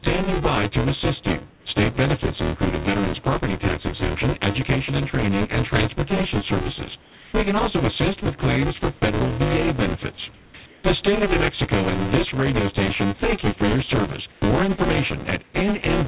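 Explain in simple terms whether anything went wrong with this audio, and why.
A steady robotic buzz, about 200 times a second, runs under the speech throughout. This is buffer tearing: playback keeps overlapping the audio being written, so roughly half of each slice repeats sound from a moment earlier.

The natural background turns into flat, quieter hiss at 1.50–1.66 s (after "by to assist you"), 7.02–7.34 s, 10.34–10.54 s, 10.66–10.84 s, 14.32–14.42 s (after "you for your service") and 15.44–15.54 s. This is comfort noise in place of the background, likely because the sender paused transmission and the receiver filled the gaps with synthetic noise.

At 14.40–14.42 s the next word starts abruptly, missing its soft beginning. This onset clipped by the voice detector likely happened because the sender noticed the returning sound about 20 ms late.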